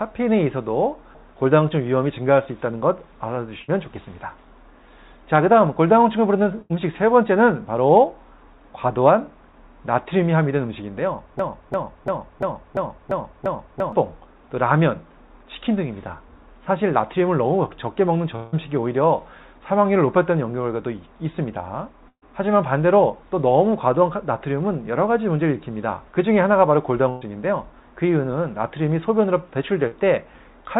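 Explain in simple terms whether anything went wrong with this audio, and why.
Several things go wrong, all typical of audio sent over a call connection.

A burst of packet loss happens four times: at 3.62 s, 6.62 s, 22.08 s and 27.10 s. Each time a chunk of sound, about 60, 80, 140 and 120 ms long, never arrived, so the receiver stretched the last sound into a brief buzz or hiss that fades. At 22.08 s the fill dies away into a short silence before the sound returns. The sound then picks up further along, with that piece skipped.

A broken-record loop runs from 11.39 s to 13.93 s. One piece of about 0.34 s plays seven times back to back, exactly the same each time, instead of the sound moving on. That exact repetition separates it from the packet-loss faults, which smear or fade rather than repeat. The likely cause is the stream stalling and resending the last fragment it held.

A long network dropout occurs from 18.36 s to 18.54 s. 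About 160 ms of sound is missing, covered by a fading continuation of the last sound that runs for the whole gap without going silent. It is the longest continuous fill in the clip, likely because the connection delivered nothing at all for that stretch rather than dropping a few packets.

Short concealed packet loss shows up at 29.87 s. Only about 40 ms went missing, so the patch is a quick smear or wobble, and a tiny bit of sound can simply vanish.

Throughout, the sound has a phone-like quality with nothing above 4 kHz. That comes from the call codec narrowing the range, not from a fault.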